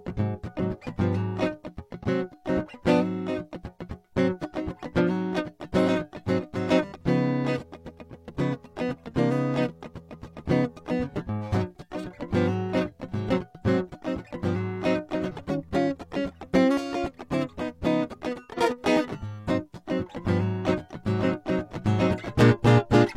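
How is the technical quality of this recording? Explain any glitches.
The music has two audible glitches, both compressed frames skipped.

At 2.0 s and again at 18.53 s, the playback jumps forward. Whole compressed frames, each about 46.4 ms long, never reached the output. Either they were missing or the decoder rejected them as corrupt. The first jump loses around five frames, roughly a fifth of a second of music; the second loses around ten, about half a second. At each gap the music lurches ahead by the missing stretch.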